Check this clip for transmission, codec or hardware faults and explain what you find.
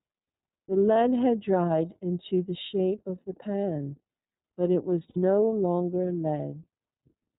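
Two faults are audible: codec coloration running through the whole clip and three brief dropouts that the decoder papers over.

Across the entire speech the sound is dull, with nothing above 4 kHz, and it carries a plainly audible rough, slightly synthetic edge. That is the iLBC codec, which codes each frame's excitation independently. The character fits its 30 ms frame mode at about 13.3 kbps.

At 0.93 to 0.96 s, 2.67 to 2.70 s and 5.10 to 5.17 s, the speech briefly smears into a held, faintly buzzy vowel, the last one noticeably longer, then snaps straight back. These are lost iLBC frames: the decoder fills each gap by repeating the last pitch cycle blended with noise. The first two fit one missing 30 ms frame each, and the third fits two. Because each frame stands alone, recovery is immediate.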